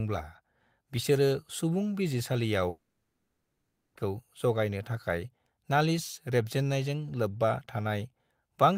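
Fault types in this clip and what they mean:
long network dropout: after "बिसोरो सुबुं बिजिरसालियाव" the speech becomes a fading buzz, then silence until 3.97 s, likely lost packets, too long for a brief glitch.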